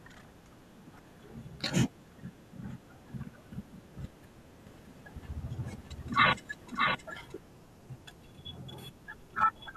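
A speech recording with two faults. From 0.96 to 0.99 s there is a brief glitch from damaged data in the compressed stream: corrupted bytes make the decoder misread frames and lose sync until it finds the next header. Between 4.67 and 7.39 s a doubled audio track appears: a full-band copy of the speech, roughly 5 dB quieter, trails the original by about 0.7 s. It has no reverberant tail and switches on and off abruptly, which likely points to a second, slower capture path or an edit holding two offset copies.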